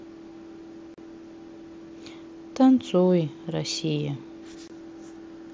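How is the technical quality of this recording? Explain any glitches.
The recording has two short dropouts, both from unconcealed Bluetooth headset packet loss. The speech runs over a wideband mSBC headset link, so it tops out around 8 kHz with a light grainy edge on louder sounds.

The first hole sits at 0.94 to 0.98 s, about 38 ms long, and the second at 4.68 to 4.70 s, about 23 ms. In each case a run of voice packets between headset and phone never arrived (roughly five in the first gap, which fits the length), and nothing patched over them. You hear the speech cut out abruptly and snap back.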